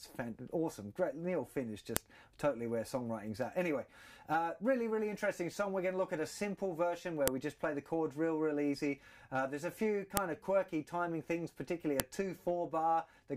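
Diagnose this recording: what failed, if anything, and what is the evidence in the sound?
File header played as audio, heard as sharp clicks at 1.97, 7.28, 10.17 and 12.00 s. This is a storage or file-joining fault: separate WAV pieces were concatenated with their headers intact, so those header bytes play back as samples, snapping loudly regardless of the surrounding sound.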